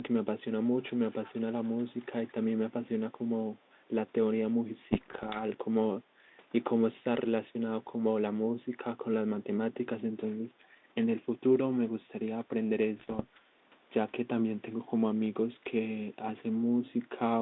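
Speech over a narrowband phone-type link, roughly 200 Hz to 3.7 kHz, with the light graininess you'd expect from G.726 ADPCM at something like 32 kbit/s. The first problem is echo leak, heard from 1.07 to 1.71 s and again briefly from 2.19 to 2.33 s. A faint delayed copy of the voice trails the original by about 216 ms, sitting roughly 30 dB down in the first stretch and around 35 dB down in the second. It's quiet, and that fixed lag marks it as a delayed repeat rather than room reverb. The likely cause is a speakerphone at the far end whose echo canceller didn't fully scrub what its mic picked up from its own loudspeaker, so some of it got sent back. Next come bit errors on an ADPCM link, from 4.92 to 5.44 s and from 12.98 to 13.21 s. They show up as pops and short rough, crackly bursts with little jumps in level. That's the signature of flipped bits in an adaptive coder: each bad bit knocks the decoder's step size and predictor off course, so the damage rings on for a few milliseconds instead of being a single click. 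The error rate sounds modest, something on the order of half a percent. Last, right after that second burst, there's background gating by the echo canceller from 13.34 to 13.47 s. The room sound underneath ducks by about 9 dB for roughly 150 ms and then comes back. What you're hearing is the canceller clamping the microphone down hard while it thinks the loudspeaker is active, then releasing it.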